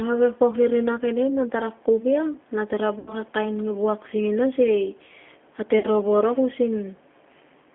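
Throughout, the speech carries G.729 codec damage. It sounds band-limited to about 250 Hz to 3.4 kHz, with a rough, synthetic edge that fits an 8 kbit/s G.729A coder. From 2.99 to 3.14 s, after "ia na tara", and again from 5.79 to 5.85 s, there is VoIP packet loss concealed by the speech codec. About 80 ms and 40 ms of audio went missing. The decoder stretches the last sound into a fading tone or noise, which lingers weakly before recovering.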